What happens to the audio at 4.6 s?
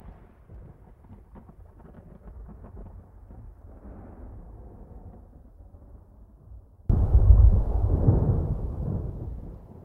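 At 4.6 s the audio sits inside a stretch from 0.0 to 6.9 s where the sound drops by about 36 dB and turns faint, which points to one channel inverted. The likely cause is that one stereo channel has flipped polarity, so summing to mono cancels everything shared between the channels and leaves only their small difference.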